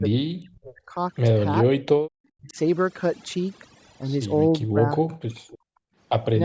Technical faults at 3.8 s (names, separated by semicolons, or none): overdone noise removal